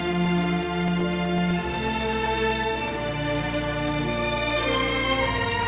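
From 0.13 s to the end, the sound is broken by periodic USB or driver dropouts. Every 0.125 s, about eight times a second, a brief slice of audio goes missing and is replaced by silence. Something on the system stalls the USB bus or the audio driver on a fixed cycle. Each gap is heard as a regular tick that sounds only while there is signal. The band also stops at 4 kHz, which fits a narrowband G.711 call path.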